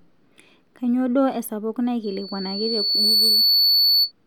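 From 2.03 s to 4.12 s, loudspeaker feedback squeal: the microphone re-amplifies the speaker output, and a 4.5 kHz tone swells over about a second to a few dB above the speech. A spectrogram shows a bright horizontal line; the waveform's envelope steadily thickens.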